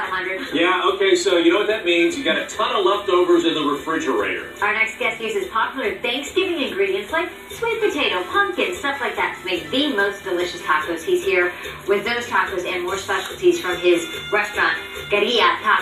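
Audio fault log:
Nothing stood out on listening to this audio.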